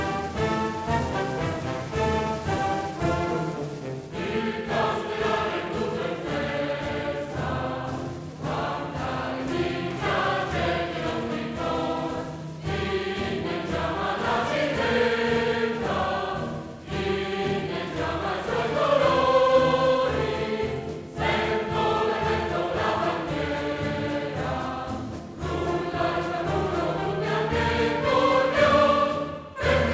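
Nothing here stands out as a fault; the audio has passed through a call connection, and the lack of content above 8 kHz is just what a wideband call codec like G.722 does.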